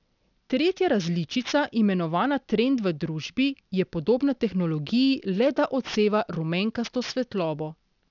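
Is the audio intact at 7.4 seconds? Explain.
No. Aliasing runs through the whole clip, including 7.4 s. The speech appears to have been resampled downward, consistent with a 12 kHz rate, without an anti-aliasing filter, so content above 6 kHz folds back as unrelated tones roughly 20 dB down, making sibilants gritty and metallic.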